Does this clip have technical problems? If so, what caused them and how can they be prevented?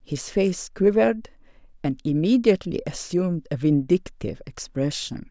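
No, there's nothing technically wrong to hear in this one, so there's no cause to track down and nothing that needs preventing.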